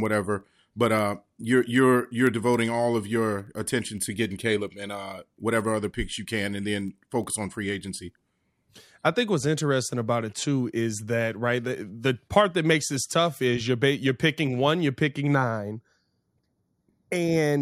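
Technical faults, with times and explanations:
15.35 to 17.62 s, channel delay (comb filtering): right after "picking one you're picking" the speech turns hollow and phasey through to the end. One channel is running late by a fraction of a millisecond, roughly 0.2 ms, and when the two get folded to mono the shared content cancels at regularly spaced frequencies. The first deep notch lands around 3 kHz.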